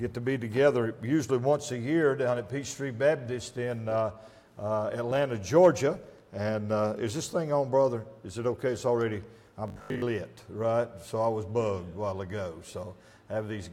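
Between 9.68 and 10.06 s the audio turns into a rigid, metallic buzz at 50 Hz, classic robotic sound from repeated short buffers. It's likely a 20 ms chunk being looped while fresh audio arrives too slowly, so most of that stretch is repeats rather than real material.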